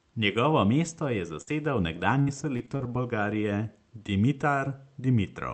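From 1.41 to 2.93 s the speech suffers repeated packet loss, producing a robotic sound. Six short holes, the longest 57 ms and about 220 ms missing in total, are each patched by stretching the last sound, with about a fifth of a second rebuilt this way. Unlike a single dropout or a click, these closely spaced repeats leave the speech choppy across the whole stretch, heard through the Opus call path's 8 kHz band limit.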